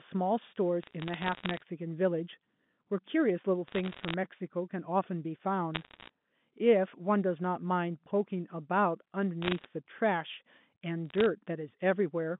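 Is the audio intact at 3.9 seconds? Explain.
No. From 3.68 to 4.14 s the digital phone line carrying this speech suffers bit errors: stray bits in the G.711 mu-law stream arrive flipped, at a rate of somewhere under one percent. Each flipped bit corrupts a single sample, and when it lands on an upper bit of the logarithmic code, or on the sign of a loud sample, that sample leaps away from its neighbours. The result is a spray of sharp ticks and crackle over the narrowband speech, which itself passes through unchanged.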